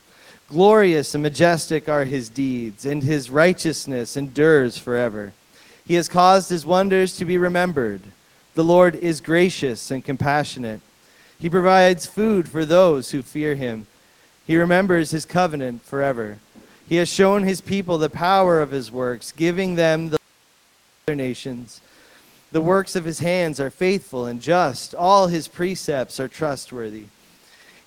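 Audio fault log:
20.17–21.08 s, audio dropout to a faint residue: the sound cuts off abruptly for about 0.91 s and returns just as suddenly, with only faint hiss around 40 dB below the signal filling the gap. The likely cause is the signal being lost before a break while everything after it stayed live. On the waveform the envelope drops to a thin noise band with sheer edges. The spectrogram shows a sharp-sided block of dim, broadband noise.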